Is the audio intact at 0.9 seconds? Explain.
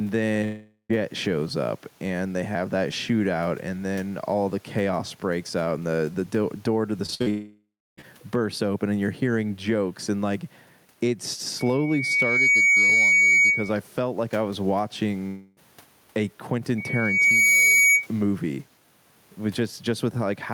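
No. A long network dropout runs from 0.44 to 0.91 s, likely from audio packets failing to arrive. Roughly 0.46 s of sound never plays. The receiver extends the last sound as a fading buzz or hiss, leaving a short silent stretch before the audio resumes at "shows up and they". Gain pumping is also present at this moment. The level is likely being held down by a fast limiter after excessive input gain, swinging around 10 dB, so loud and soft parts sit closer in level and the sound is squashed.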